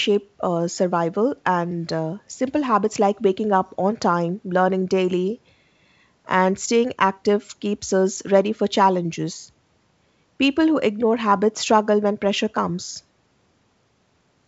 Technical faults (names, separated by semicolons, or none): none